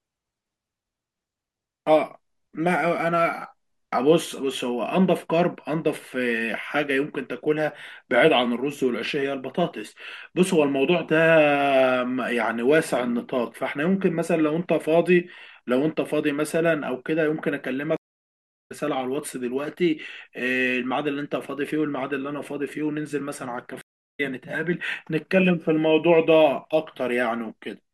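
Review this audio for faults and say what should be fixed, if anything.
Two stream reconnects break the speech, at 17.97–18.72 s and 23.81–24.20 s. The connection dropped, playback went silent for about 0.69 s and 0.34 s, then a fresh decoder picked up mid-stream roughly 0.4 s and 0.2 s later, so some speech is skipped. The waveform shows a flat gap with an abrupt or briefly faded onset, and the spectrogram shows a blank vertical band with mismatched content on either side. Larger client buffering and seamless resume from the last received position would prevent this.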